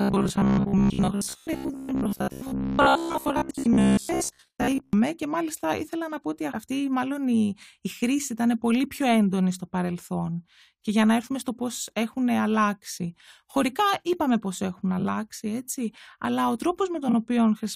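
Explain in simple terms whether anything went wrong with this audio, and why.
From the start to 4.93 s, just before "και μάλιστα ήθελα να", the speech has a rigid, metallic buzz at about 67 Hz. This is robotic sound from repeated short buffers, likely from a tiny 15 ms slice of audio being replayed over and over while much of the real sound was skipped.

There are also brief garbled flutters at 3.51 to 3.65 s, at 15.00 to 15.05 s between "είπαμε πώς έχουν" and "έτσι αλλά ο", and at 17.08 to 17.14 s after "έτσι αλλά ο". These are frames out of order: two neighbouring chunks of audio were played in swapped order, but no time was lost.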